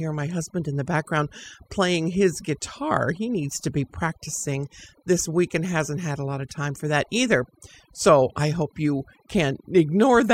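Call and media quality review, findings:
Overdone noise removal, whole clip. Background drops and breaks up into twinkly specks. Suppressor set way too hard, cutting any band near its noise estimate, so quiet speech detail gets dropped along with the noise.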